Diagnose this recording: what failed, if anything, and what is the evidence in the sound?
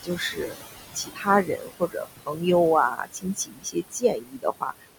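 Noise suppressor artifacts in call processing: the room noise sinks about 18 dB between phrases and rises under them. A spectrogram shows the noise floor pumping frame by frame.

Speech cut by the noise suppressor at 0.03–0.66, 0.93–1.27, 1.44–2.43 and 2.91–4.88 s: soft sounds, mistaken for noise, drop about 19–22 dB and sound swallowed. The waveform shows them as dips.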